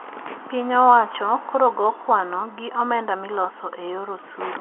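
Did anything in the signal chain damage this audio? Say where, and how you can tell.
No, nothing in the chain damaged this speech: the narrow band with nothing above about 3.8 kHz is simply the G.711 telephone coding doing its job, which fits a standard 64 kbps mu-law line.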